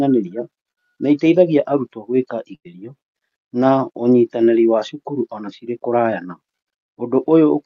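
At 0.71 to 0.93 s, just before "nĩ ĩteithagia arutwo", and again at 2.55 to 2.67 s, a burst of packet loss leaves about 60 and then 100 ms of speech missing. Unlike a plain dropout to silence, the last sound is stretched out and fades.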